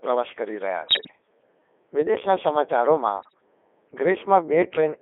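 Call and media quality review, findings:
Robotic, buzzy speech throughout, band-limited to roughly 300 Hz to 3.5 kHz. Heavy Codec 2 vocoder damage, consistent with its 3.2 kbit/s mode. Only pitch, voicing, energy and spectral envelope transmitted; decoder rebuilds sound from sine waves, original waveform lost.

0.86 to 1.11 s: bleeps, warbles, abrupt pitch and level jumps. Bit errors on digital voice radio, fairly heavy error rate; damage spread fits about a dozen corrupted vocoder frames, each flipped bit skewing frame parameters.

3.18 to 3.34 s: shorter, milder warble and tone-colour jumps. Same bit errors on digital voice radio, lower error rate; sounds like about half a dozen frames hit.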